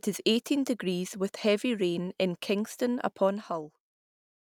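No technical faults are audible anywhere in the speech.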